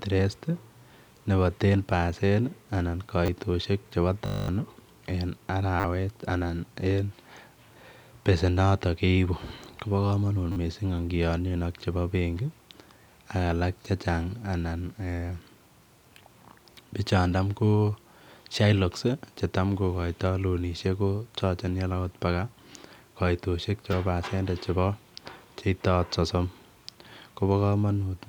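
At 3.26 to 3.28 s, a repeated buffer: a 10 ms slice plays twice more, heard as a brief click-like stutter. This fits a 10 ms buffer re-sent when fresh audio arrived late, losing about 20 ms.

From 4.26 to 4.48 s comes a system hang loop. A single 20 ms piece cycles exactly 11 times, giving a steady 50 Hz buzz and about 200 ms of missing audio. Its length and unbroken regular rate set it apart from the brief repeats.

The same repeated-buffer stutter returns at 5.80 to 5.84 s and 10.52 to 10.56 s, each with four extra plays and about 40 ms lost, and at 23.92 s as a single extra repeat.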